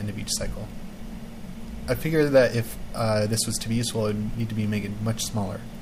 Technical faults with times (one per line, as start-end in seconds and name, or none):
0.00-5.81 timecode bleed